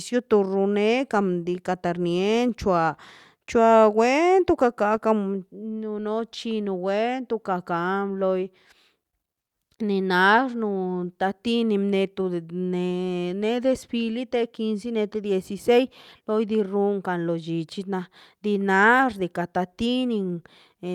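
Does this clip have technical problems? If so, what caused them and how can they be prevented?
No, nothing technical stands out here, so there's nothing to trace back or guard against this time.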